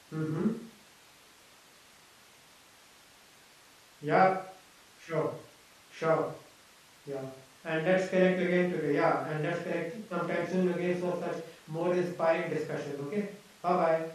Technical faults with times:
none

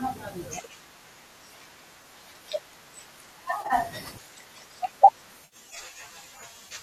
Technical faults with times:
2.02 AAC frame loss with concealment
3.62-3.73 AAC frame loss with concealment
5.45-5.56 AAC frame loss with concealment

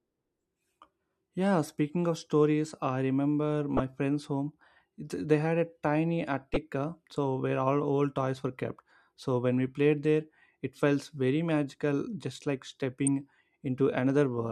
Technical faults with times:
3.77-3.80 corrupt frame decoded
6.54-6.57 corrupt frame decoded
13.07 corrupt frame decoded

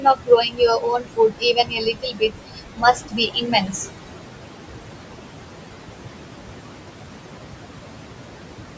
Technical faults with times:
0.00-8.77 noise suppressor artifacts
0.00-3.75 speech cut by the noise suppressor

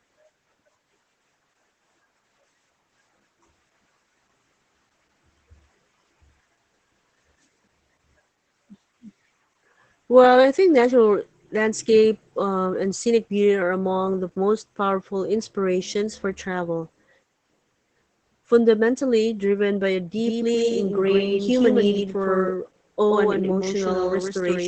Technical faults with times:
0.00-24.68 Opus voice compression
20.18-24.68 doubled audio track

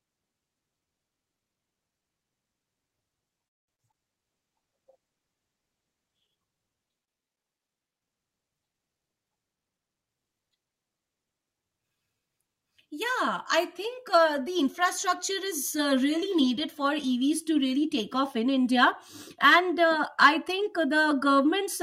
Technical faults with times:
3.47-3.70 call audio freeze
3.74-3.95 short concealed packet loss
4.28-6.35 call bitrate drop
7.00-8.01 switch to a distant microphone
8.93-9.88 jitter buffer speed-up
14.10-15.16 jitter buffer speed-up

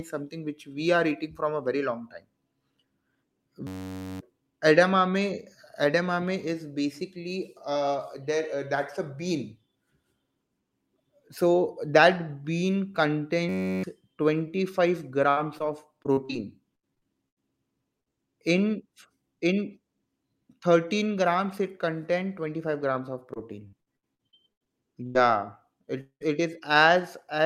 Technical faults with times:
3.67-4.20 system hang loop
13.49-13.83 system hang loop
15.29-17.38 repeated packet loss (robotic sound)
18.00-18.10 burst of packet loss
23.34-25.17 repeated packet loss (robotic sound)
26.01-26.22 long network dropout

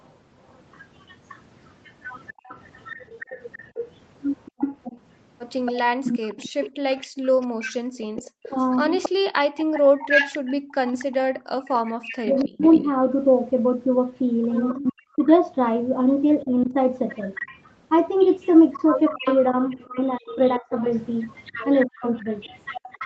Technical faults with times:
0.05-12.87 echo leak
7.07-8.16 background gated by the echo canceller
8.47-12.64 speech suppressed in double talk
14.69-15.28 echo leak
14.74-16.74 speech suppressed in double talk
17.14-23.06 echo leak
19.14-22.05 speech suppressed in double talk

